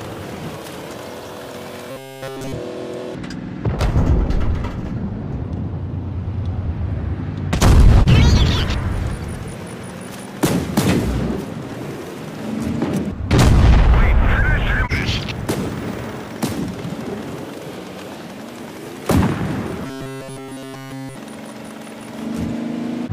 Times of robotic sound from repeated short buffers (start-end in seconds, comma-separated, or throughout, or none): 1.91-2.52, 19.86-21.16